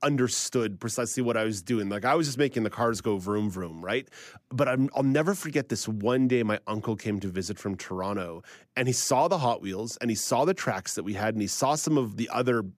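No technical faults can be heard anywhere in the speech recording. There is no moment that needs a timestamp or an explanation.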